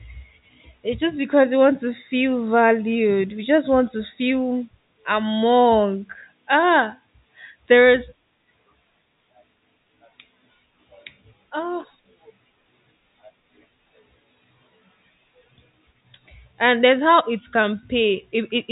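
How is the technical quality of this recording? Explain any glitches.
No glitches to report: the speech carries the narrow telephone band of G.711 coding, with nothing audible above about 3.8 kHz and only the faint level-following hiss that format leaves under the signal.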